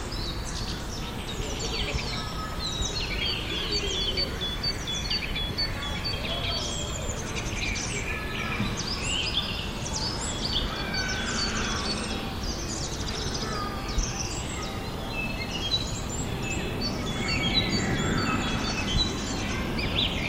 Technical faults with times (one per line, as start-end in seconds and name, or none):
none